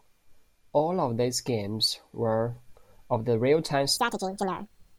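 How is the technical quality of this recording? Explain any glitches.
One fault stands out: a section at the wrong speed over the final second of the speech, from 3.97 s to the end of the clip at 4.98 s. This stretch plays back 1.76 times faster than it was recorded, so pitch and tempo rise together, about ten semitones higher, and the voice turns thin, chipmunk-like and rushed. The abrupt switch in the last second likely comes from that portion being resampled or clocked at the wrong rate during editing or playback.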